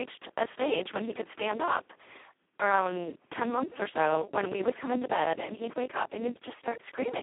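Speech clip, heavily damaged by the Speex codec throughout: a starved bit budget near 2.1 kbps makes it hoarse and robotic, band-limited to roughly 250 Hz–3.5 kHz, nothing above 3.8 kHz.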